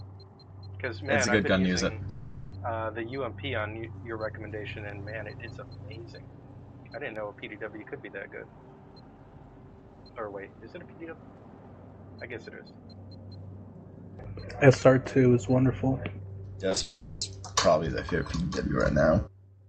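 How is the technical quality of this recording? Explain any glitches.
The recording has two kinds of network glitch. It passed through an Opus call codec at around 40 kbps, and the high end stops near 8 kHz.

Long network dropout, 2.09 to 2.53 s: audio likely stopped arriving, so the receiver stretched the last sound into a fading buzz for about 430 ms, and that stretch of the original is lost.

Repeated packet loss (robotic sound), 16.69 to 16.81 s: four short holes, each up to 20 ms, were patched by extending the preceding sound, covering over half the span and giving a choppy texture.

Long network dropout again, 16.82 to 17.22 s: straight after that, another roughly 390 ms gap, likely from audio not arriving, is filled with a decaying continuation rather than silence, and the audio resumes with that portion missing.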